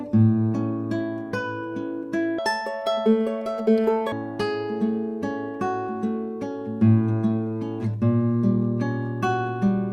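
Audio read two samples at a time affects 2.39 to 4.12 s. The sound runs at double speed and an octave high. Paired samples are taken as one frame.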